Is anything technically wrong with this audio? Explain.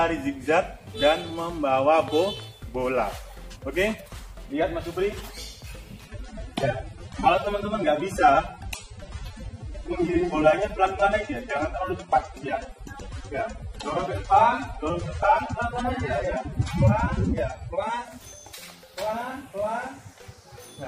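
Yes. From 6.05 s to 18.05 s the audio switches to an adaptive stream at a lower bitrate. When the connection slowed, the player fetched a lower-quality encoding for those 12 seconds, and the sound fits a step down from roughly 96 to 24 kbit/s AAC. Codec artefacts increase and nothing remains above 12.4 kHz. Unlike a network dropout, the quality changes abruptly at both ends with no gap or missing audio.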